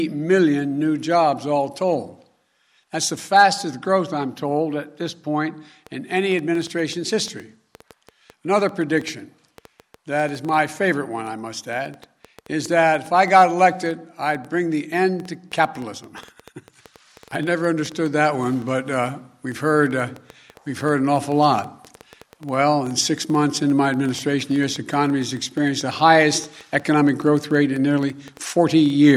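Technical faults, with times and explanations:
5.87–29.10 s, train of clicks. A steady run of short, sharp ticks starts here and lasts to the end. They come about 6.6 times per second on average, but the spacing is uneven, so the ticking never settles into a beat. Around 150 clicks sound, each of much the same shape and roughly as loud as the sound itself. They stay audible in the gaps too. The cause is likely interference from nearby equipment or a faulty connection or power supply.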